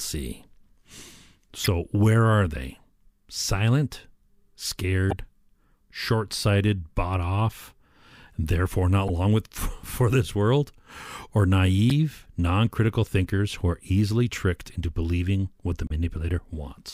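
A speech clip with five short bursts caused by damaged data in a compressed stream. They fall at 1.64–1.68 s, just before "where are they", at 5.10–5.13 s, and at 9.07–9.10 s, between "and therefore not" and "long with". Two more come at 11.90–11.92 s and at 15.87–15.91 s, after "into believing what the". Each lasts 20 to 40 ms and sounds like a brief chirp, squawk, click or short hole. Corrupted bytes made the decoder misread frames and lose sync.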